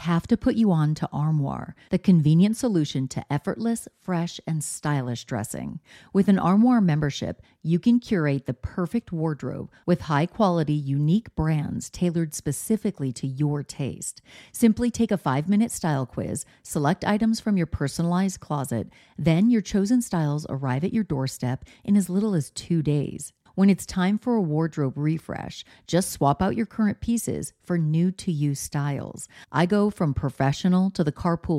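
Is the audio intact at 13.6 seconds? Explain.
Yes, the audio is intact at 13.6 seconds, with no dropout, click, distortion or other fault at that moment.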